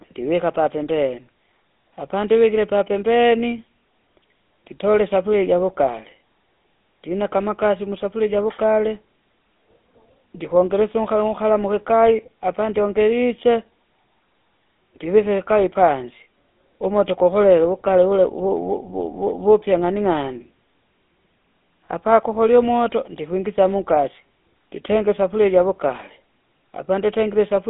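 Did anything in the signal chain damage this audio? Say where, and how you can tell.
Yes, at the codec stage, for the whole clip. The speech has the buzzy, gravelly roughness of the GSM full-rate codec, which fits a 13 kbps stream. The band runs from about 200 Hz to 3.6 kHz, with nothing above 3.8 kHz. The codec resynthesises the voice from a vocal-tract model driven by coarse pulse excitation.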